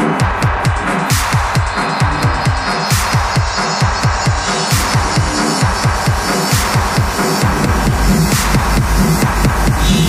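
No technical fault can be heard anywhere in the audio. Nothing in the sound calls for a time or a cause.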